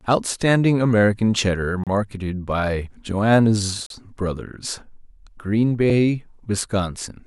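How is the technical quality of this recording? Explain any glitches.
The speech has three short dropouts from a gap between stream segments, at 1.84 to 1.87 s, 3.86 to 3.90 s, and 5.90 s. They come roughly every 2 s, which points to segment boundaries. Each time, the segment timing leaves a small hole that the player fills with silence, so you hear a clean, hard-edged cut of about 31 ms, 38 ms and a barely-there 4 ms. Nothing is actually lost; the audio just pauses.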